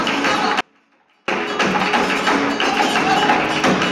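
From 0.61 s to 1.28 s the signal path most likely lost its wanted input while the chain after the break stayed live, an audio dropout to a faint residue. For about 670 ms the sound cuts out abruptly in mid-flow, leaving only a faint leak of it roughly 40 dB below its normal level, then snaps straight back. Both edges are sudden, so it doesn't sound like a natural pause or a fade.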